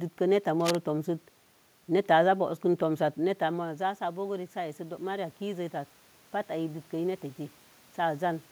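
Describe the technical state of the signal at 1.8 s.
At 1.8 s the speech signal is intact, with nothing wrong in the system's path; the room noise heard beneath it belongs to the recording itself.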